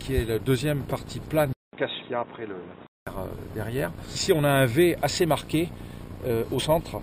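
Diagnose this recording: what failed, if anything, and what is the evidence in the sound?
Driver stage: a 0.2 s gap at 1.53 s, then nothing above 3.8 kHz and new faint background noise until 3.07 s at unchanged level; likely an input switched to a poorer device, not filtering.

Codec stage: a brief disturbance from 6.58 to 6.61 s marks damaged data in a compressed stream, unlike a dropout's clean silence.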